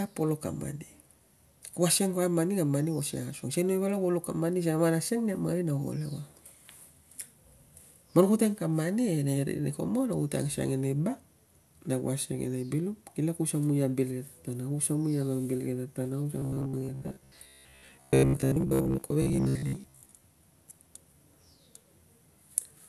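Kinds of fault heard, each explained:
Robotic sound from repeated short buffers: from 16.39 to 20.26 s the speech turns into a stiff, metallic buzz locked at about 66.7 Hz, with the wording still loosely traceable underneath. The likely cause is audio arriving too slowly, so the playback keeps looping its last chunk, roughly 15 ms, which fits that pitch, and skips the real material in between. Most of that stretch seems to be repeats rather than fresh sound.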